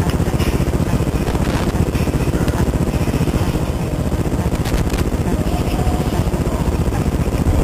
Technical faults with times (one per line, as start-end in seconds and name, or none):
1.27-1.71 loose connector crackle
4.55-5.01 loose connector crackle